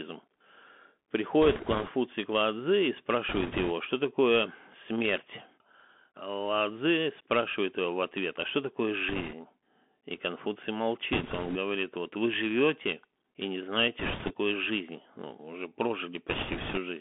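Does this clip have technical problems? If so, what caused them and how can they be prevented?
Yes. The whole clip carries Bluetooth CVSD headset codec damage: the speech is confined to roughly 200 Hz to 3.4 kHz, which fits a 64 kbps CVSD link. Its one-bit delta coding cannot follow fast, loud high-frequency movement, so s sounds turn scratchy over a granular hiss. Prevent it by using a wideband headset profile such as mSBC or a wired microphone.

Bit errors on a Bluetooth voice link add bursts of rushing, crackly noise without sharp clicks at 1.42–1.90, 3.29–3.72, 9.09–9.33, 11.13–11.57, 13.99–14.34 and 16.29–16.78 s. At an error rate of a few percent, the flipped bits each nudge the waveform by an amount that grows with the speech level and then fade. Prevent them by shortening the link distance and avoiding 2.4 GHz interference.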